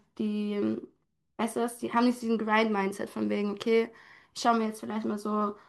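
Speech recording; no technical faults present at any point.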